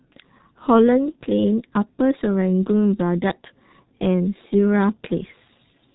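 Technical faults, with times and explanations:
Throughout, G.723.1 codec: speech sounds heavily muffled and hoarse, with nothing above 3.8 kHz, consistent with a low-bitrate codec updating its voice model slowly.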